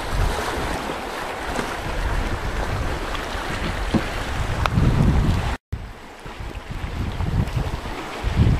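The audio has three spots where chunks play out of order. From 0.75 to 1.75 s, a 250 ms chunk arrives three chunks late and plays after the audio that should follow it. From 3.5 to 4.0 s and from 6.25 to 6.75 s, one 250 ms chunk lands one place late, so two neighbours swap. Nothing is missing. Each spot sounds jumbled.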